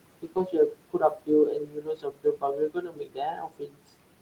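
Noise suppressor artifacts run through the whole clip. The suppressor pulls down what it judges to be steady noise by about 21 dB, frame by frame. The room noise, about 15 dB below the speech, sinks in the pauses and rises back under the voice.

Speech cut by the noise suppressor follows from 0.22 to 1.3 s and again from 1.51 to 3.81 s. The suppressor mistook parts of the speech for noise and lowered them by as much as about 22 dB. That adds up to roughly 0.7 s in the first stretch and about 2 s in the second. Soft consonants and word endings there sound swallowed and faint.

A lost packet rebuilt from error correction shows up from 1.95 to 2.01 s. That 40 ms patch fits two 20 ms packets replaced by the low-bitrate copies carried in the packets that followed. Because those copies filled the gap, playback never breaks, but the audio turns briefly rougher and noisier.

The same rebuild happens again from 2.79 to 2.81 s, a single 20 ms stretch heard as a short grainy blemish.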